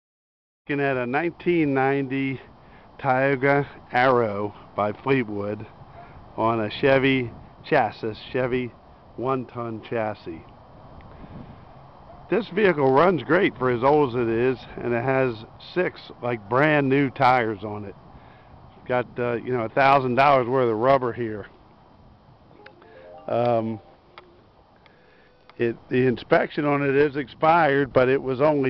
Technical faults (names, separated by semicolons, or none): none